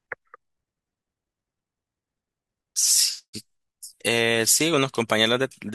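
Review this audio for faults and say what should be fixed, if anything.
Nothing stood out on listening to this speech recording, and there is nothing that needs fixing.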